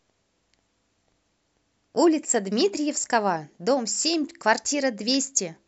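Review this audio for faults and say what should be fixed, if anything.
From 2.25 to 2.30 s, the speech dips by about 6 dB for 50 ms. The likely cause is one channel dropping out before the mono sum. Check stereo cabling and interface connections so both channels stay live.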